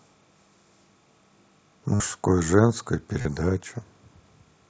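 Speech recorded over a Bluetooth headset link, with the mSBC wideband codec audible as a light graininess. Timecode bleed runs throughout. A faint chirping warble sits about 45 dB below the speech, flipping between roughly 1 kHz and 2 kHz, which fits 29.97 frame-per-second linear timecode leaking from a nearby track or cable. Concealed Bluetooth headset packet loss appears twice. From 1.95 to 2.00 s, about 52 ms of audio was lost, and the receiver filled the gap by repeating recent waveform. That sounds like a brief held buzzy tone and fits roughly seven dropped packets. A shorter gap at 3.21 to 3.26 s, about 38 ms long, behaves the same way, with a small warble as real audio resumes.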